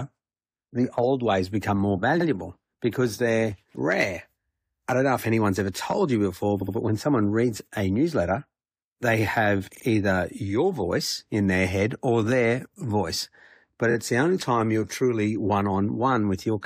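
Repeated frames make the speech stutter at 2.20 s after "old ways become more", at 6.61 s, at 9.74 s after "a newsletter they have", and at 13.90 s before "it's the only time". Blocks of 23 to 70 ms of compressed audio got decoded again, once or twice each, so you hear a quick hiccup.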